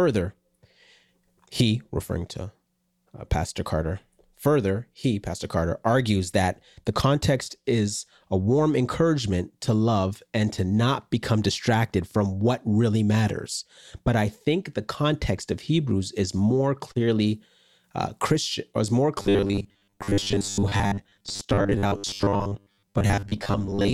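From 19.18 s, right after "or is more", the speech collapses into a rigid, metallic buzz pitched at 100 Hz that roughly tracks the syllables, and it lasts until the clip ends at 23.93 s. This is robotic sound from repeated short buffers, likely caused by audio arriving too slowly so that the last 10 ms was replayed over and over, covering most of that stretch while the real signal was skipped.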